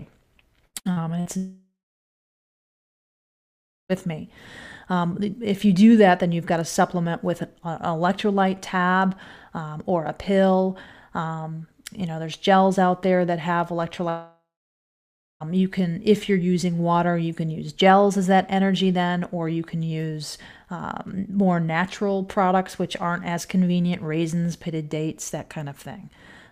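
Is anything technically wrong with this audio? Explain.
Yes, there are a few network faults. From 0.67 to 1.28 s there's repeated packet loss: four short gaps, the longest 60 ms, get patched by stretching the last bit of audio, so about a third of that stretch sounds choppy and robotic. Then there are two long network dropouts. From 1.37 to 3.92 s the audio smears into a fading buzz or hiss and then roughly two seconds of silence. From 14.09 to 15.52 s it does the same, with about a second of silence. Both times the audio comes back with that stretch missing, likely because nothing arrived from the network and the receiver filled the hole.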